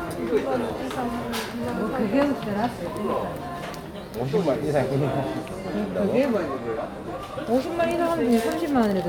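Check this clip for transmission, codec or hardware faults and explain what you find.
The sounds in the clip come through with no audible transmission, codec or hardware fault anywhere in the signal.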